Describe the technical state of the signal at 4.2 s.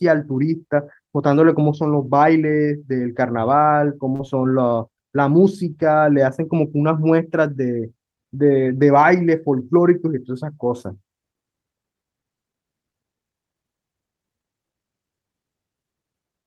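A brief smear runs from 4.15 to 4.21 s, where the sound wobbles and a short consonant may vanish. This is short concealed packet loss: about 40 ms never arrived in time, and the decoder extended the preceding sound across the gap before blending back.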